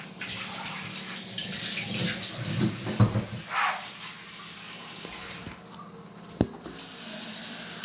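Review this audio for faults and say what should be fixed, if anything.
Nothing here needs fixing. The sound carries the usual coding texture of a call path and has nothing above 4 kHz, which fits a G.711 mu-law codec.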